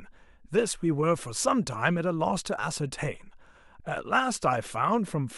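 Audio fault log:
No faults heard anywhere in the speech.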